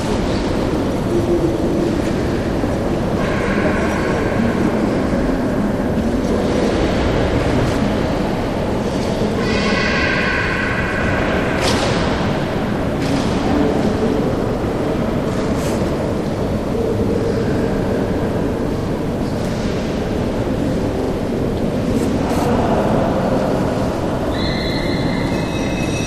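At 18.77 s and again at 21.01 s you get a quick stutter from repeated frames. A roughly 43 ms chunk of compressed audio gets played two extra times, so that slice loops back on itself and each spot runs about 85 ms longer.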